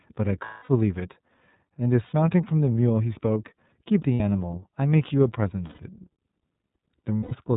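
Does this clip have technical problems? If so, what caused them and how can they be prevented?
Yes. The speech is band-limited to 4 kHz, with a slightly rough, synthetic grain throughout. This is the iLBC codec, which codes each frame's excitation on its own, and the sound fits its 30 ms mode at 13.33 kbps. It differs from a plain low-pass or a muffled microphone because the roughness sits in the voice texture itself, not only in the missing treble. Carrying the call on a wideband codec such as Opus or G.722 would prevent it.

Lost iLBC frames appear at 0.45–0.69 s (240 ms), 2.07–2.13 s (60 ms), 4.14–4.21 s (60 ms), 5.67–5.80 s (120 ms) and 7.17–7.33 s (150 ms). In each gap the decoder repeats the last pitch cycle blended with noise, so the voice becomes a held, buzzy or breathy vowel, fading across the longest gap. Unlike a hard dropout, the gaps are filled rather than silent. Unlike concealment in codecs where each frame depends on the one before, the voice returns cleanly at once. 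A steadier network path with forward error correction or redundant frames, plus an adequate jitter buffer, would prevent it.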